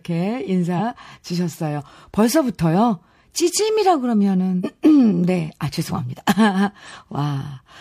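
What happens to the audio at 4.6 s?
Right around 4.60 to 4.65 s you get compressed frames skipped: a run of frames never made it to playback, so the speech lurches forward by about half a second, which fits roughly ten frames of 46.4 ms.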